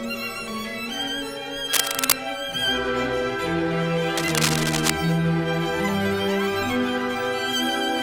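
From 1.72 to 2.21 s and again from 4.16 to 4.91 s, a dense, uneven scratching rustle sits on top of the sound at roughly the same loudness as the sound itself. This is cable scratch noise, likely from a worn lead, connector or control being moved so its contact resistance jumps about. Unlike steady hiss or regular clicks, each burst is irregular and lasts under a second, tracking the physical movement.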